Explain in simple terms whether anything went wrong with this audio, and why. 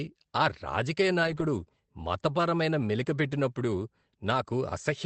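Yes. Two short stretches sound rougher and noisier than the rest: about 1.23 to 1.41 s, and again briefly at 2.81 to 2.83 s. This is a lost packet rebuilt from error correction. Pieces of audio went missing in transit, but the next piece carried a lower-quality backup copy, and the player used it. That is why there is no silence or dropout. A lost packet with no copy would leave a gap or a smeared, buzzy patch instead.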